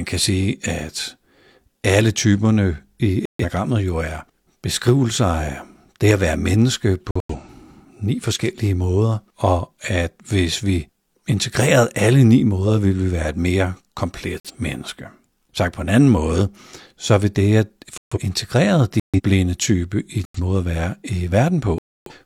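Flipped bits in the compressed stream made the decoder reject whole frames, and the player substituted silence. The result is corrupt frame muting: abrupt holes in the speech, with timing preserved. They fall at 3.25 s (0.19 s), 7.11 s (0.25 s), 14.40 s (0.15 s), 17.98 s after "så vil det at" (0.20 s), 19.00 s before "type i" (0.21 s), 20.25 s between "type i" and "måde at være" (0.15 s), and 21.78 s (0.33 s, the longest gap).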